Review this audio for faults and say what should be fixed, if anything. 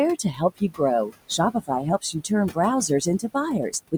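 Noise suppressor artifacts run through the whole clip. The suppressor is pulling the room noise, which sits about 18 dB below the speech, down by about 20 dB in each band it judges to be steady noise, and it makes that call frame by frame. The background therefore sinks in the gaps and comes back up under the speech. Setting the suppressor to a gentler reduction, well short of 20 dB, would avoid this.

Speech cut by the noise suppressor appears twice, between 0.23 and 0.8 s and between 1.29 and 1.7 s. In both places the suppressor mistook quiet parts of the speech for noise and turned them down along with the background. In the first stretch, roughly a fifth of a second of speech is affected and drops by up to about 17 dB. In the second, about a tenth of a second drops by up to about 14 dB. Those soft sounds come across as swallowed and faint. A less aggressive noise estimate, or a floor that keeps low-level speech from being treated as noise, would prevent it.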